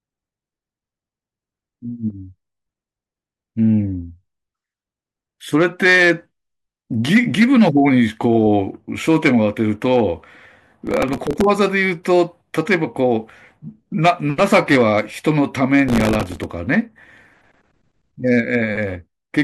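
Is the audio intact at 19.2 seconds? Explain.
Yes, the speech at 19.2 seconds is intact, with no audible technical fault at that moment.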